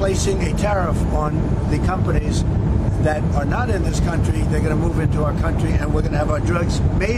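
No technical faults are audible anywhere in the audio.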